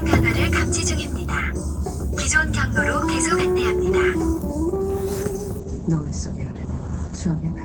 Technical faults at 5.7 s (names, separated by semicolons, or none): call bitrate drop